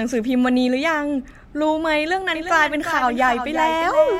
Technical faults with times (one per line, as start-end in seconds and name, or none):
2.35-4.19 doubled audio track